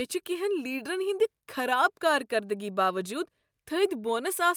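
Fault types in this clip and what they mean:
Nothing here to flag: the speech comes across without any audible technical fault at any point.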